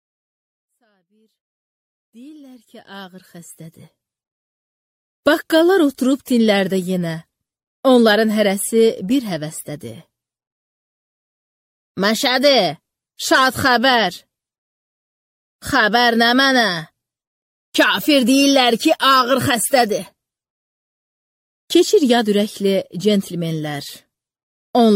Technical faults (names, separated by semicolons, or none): none